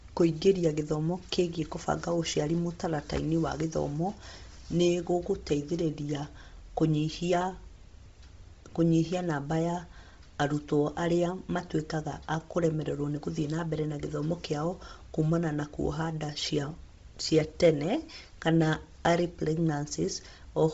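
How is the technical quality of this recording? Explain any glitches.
Quality's fairly rough. The speech is heavily compressed the whole way through, and there's a mains hum at the start.

From 0 to 5.5 s there's mains hum: a steady 60 Hz drone from power-line coupling, sitting well below the speech.

Throughout, the speech sounds breathy and grainy with nothing above 7.7 kHz, likely from heavy Bluetooth LC3 compression, which fits a low bitrate around 24 kbps.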